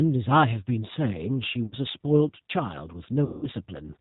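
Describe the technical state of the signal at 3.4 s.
At 3.4 s you're right in the middle of a dropout handled by VoIP packet loss concealment, running from about 3.25 to 3.47 s. Roughly 180 ms of audio never arrived, and the decoder filled the hole by carrying its last pitch and vocal-tract filter forward, turning the gain down frame after frame. So instead of fresh speech you get a smeared, buzzy tone or a coloured noise that fades away. Since each frame leans on the one before, the voice stays weak and a bit mangled for a short while after real packets resume.

Underneath that, the whole clip carries G.729 codec damage, and it's plainly audible here. The sound points to the 8 kbit/s G.729A flavour, which rebuilds speech from a filter, a pitch predictor and a few pulses per 5 ms subframe. Everything above 4 kHz is gone, leaving a boxy, slightly rough, synthetic edge. That same coarse model is what drives the concealment.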